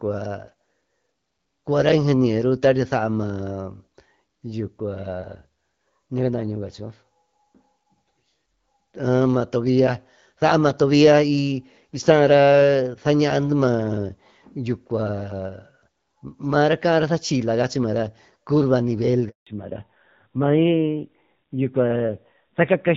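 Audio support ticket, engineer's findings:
Handover gap, 19.29 to 19.47 s: network switch mid-call, no speech frames delivered for 180 ms. Sound cuts out within a few tens of ms and stays silent until the new link starts. Content in that window lost.

Fallback to narrowband, 19.47 s to end: codec drops from HD Voice (AMR-WB, clean wideband before the switch) to older narrowband, consistent with AMR-NB around 7.4 kbit/s. Nothing above 4 kHz from here. Speech duller and rougher.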